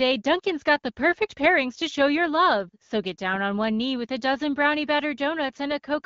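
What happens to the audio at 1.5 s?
At 1.5 s the speech comes through intact, with nothing breaking or distorting it beyond the light coloring of the AMR wideband (HD Voice) codec at 12.65 kbit/s.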